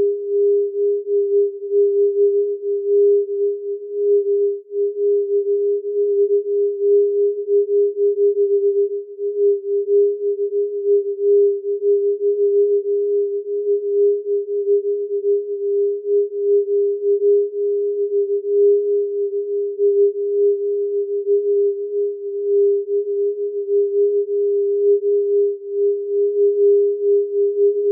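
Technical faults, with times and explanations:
No technical faults detected in this audio.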